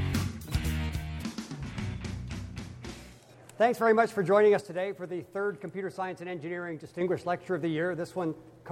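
One channel drops out from 0.89 to 3.29 s and again from 4.61 to 7.01 s: the sound falls abruptly by about 6 dB and recovers just as suddenly, likely because one stereo channel was lost, halving shared content in the mono sum.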